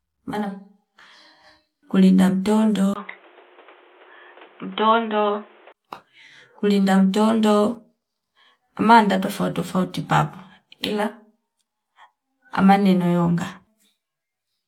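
Speech, and from 2.94 to 5.74 s it turns dull and boxy, with nothing above 3.8 kHz, a 20 ms gap at 2.94 s, a level drop of around 5 dB and a new noise floor roughly 30 dB down. That's likely the input switched to a poorer device.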